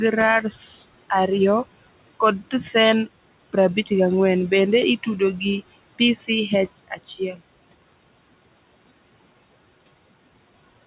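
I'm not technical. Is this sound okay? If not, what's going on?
No. Throughout the clip there are noise suppressor artifacts: a filter meant to remove background noise keeps lowering it between words, so the noise sinks between the words and rises under them.

Between 6.77 and 7.4 s you'll hear speech cut by the noise suppressor. The filter mistook parts of the speech for noise, so roughly a fifth of a second of quieter sounds comes out swallowed and faint.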